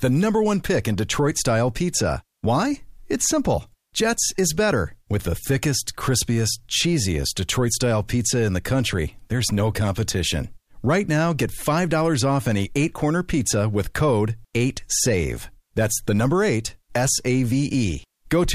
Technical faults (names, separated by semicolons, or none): none